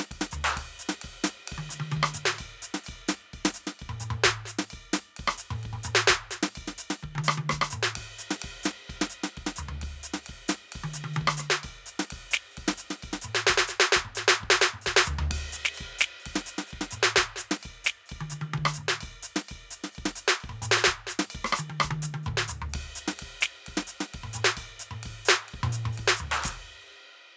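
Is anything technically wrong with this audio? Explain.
No, the music has simply passed through a call's microphone processing, which removes the lowest bass and leaves nothing above 8 kHz, and that is normal behaviour for that path.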